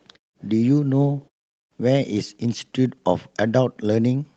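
No technical faults can be heard anywhere in this speech recording.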